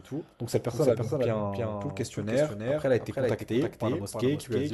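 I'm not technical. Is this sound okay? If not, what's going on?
No. The speech has a doubled audio track throughout: a second, slightly quieter copy trails about a third of a second behind. Unlike an echo, it doesn't fade or sound roomy. It's likely a second recording path mixed in with the first.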